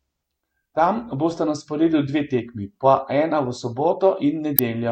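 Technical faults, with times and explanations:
4.56–4.59 s, corrupt frame decoded: near the end of the speech a short glitch cuts in, lasting about 35 ms. It sounds like roughly two damaged compressed frames that the decoder played anyway. Flipped bits in those frames gave wrong gain values or misread spectral codes, so energy landed at frequencies that do not belong to the signal, and it lasted only as long as the broken frames.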